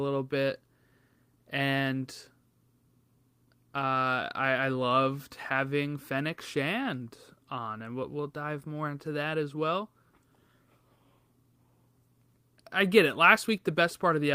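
No technical faults can be heard anywhere in this speech recording. There is nothing in the signal that calls for comment at any point.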